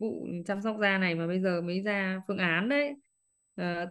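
A thin, fixed-pitch whine sits under the speech from start to finish, pitched at 8 kHz and strongest at its 16 kHz multiple, roughly 40 dB below the speech. This is USB whine: current drawn in 125-microsecond microframes leaking in through power or ground.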